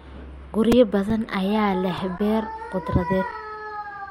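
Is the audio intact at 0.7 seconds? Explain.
No. At 0.72 s there is a repeated buffer: fresh audio failed to reach the output in time, so a block of about 2.9 ms, which fits a 128-sample buffer, was played twice more. This replaces roughly 5 ms of speech and sounds like a sharp click or tiny buzz. On the waveform, three identical short segments sit side by side with abrupt joins. A spectrogram shows a thin vertical broadband stripe at that instant.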